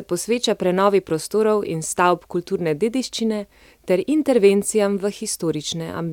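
At 2.85 s, between "prostorov in stavb kulturne" and "dediščine ter", and again at 5.34 s, a single sharp click sounds, likely from dropped samples: roughly one sample goes missing, so the waveform jumps abruptly. Unlike a dropout, no sound is lost.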